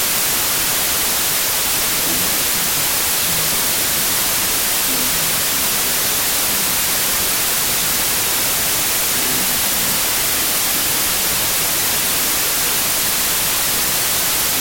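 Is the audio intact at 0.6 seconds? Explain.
No, at 0.6 s the whole clip has a wrong sample width: 32-bit samples read as 16-bit play speech at half speed under loud noise, unlike a clean speed error.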